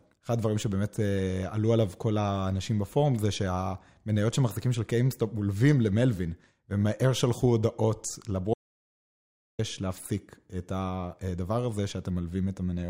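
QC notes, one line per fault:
8.54–9.59 s, audio dropout to silence: speech cuts to total silence with no room tone for 1.05 s, likely from input lost while recording continued.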